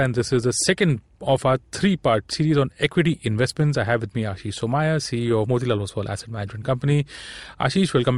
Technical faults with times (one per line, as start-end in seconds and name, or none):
none